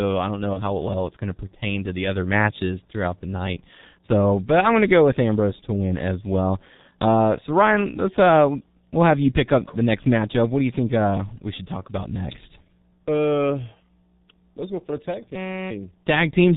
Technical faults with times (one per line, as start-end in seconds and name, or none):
0.00-16.57 G.723.1 codec
0.53-0.62 VoIP packet loss concealed by the speech codec
15.35-15.71 system hang loop